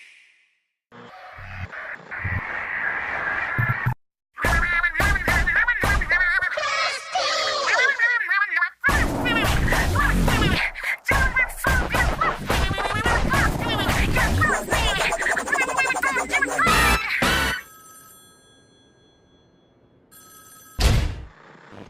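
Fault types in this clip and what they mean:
No technical faults can be heard in this recording.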